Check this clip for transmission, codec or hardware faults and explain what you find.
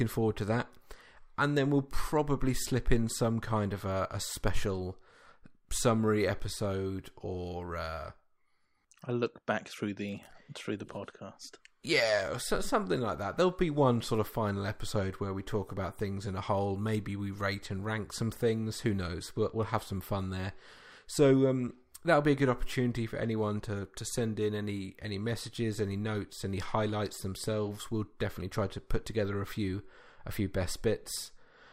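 No faults detected in this recording.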